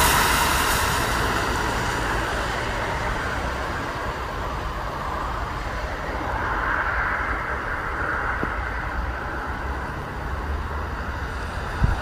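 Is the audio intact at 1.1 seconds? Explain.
Yes, at 1.1 seconds the audio runs cleanly, with no dropout, click, distortion or other fault audible at that moment.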